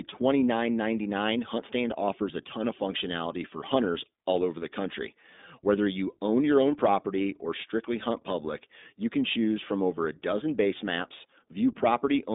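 From start to finish the speech passes through the iLBC codec: nothing above 3.8 kHz, a line band of about 200 Hz to 3.7 kHz, and a plainly rough, synthetic grain. Unlike simple band-limiting, each frame's excitation is coded independently, fitting 20 ms frames near 15 kbps.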